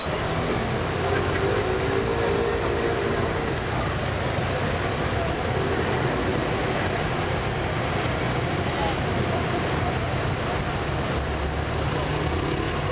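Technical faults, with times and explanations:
0.00–0.06 s, sound dropped by the voice detector: The opening 60 ms of sound is missing. Steady comfort noise fills that gap. The likely cause is the sender's detector treating the onset as background and holding back transmission until it triggered.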